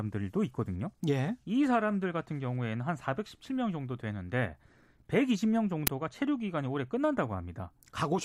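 At 5.87 s the speech is hit by a single uninitialised buffer fault: a block of about 5 ms was played out before any audio had been written into it, so whatever stale memory it held went to the output as samples. It sounds like a sharp, loud crack. Unlike a dropout, which leaves a gap, or a lone click, which is one discontinuity, this is a brief stretch of loud, unrelated noise filling the block.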